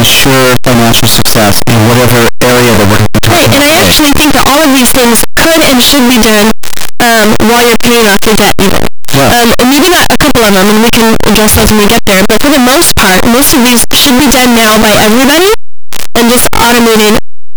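A speech clip with a fault running through its whole length: the sound is extremely loud and harshly distorted, with quiet stretches pushed up to the same level as everything else, and every point where the waveform passes through zero becoming a full-range leap. That behaviour points to signed and unsigned mixed up, most likely 8-bit samples read with the wrong signedness so the top bit is inverted. The 8-bit storage itself is read at the correct word length.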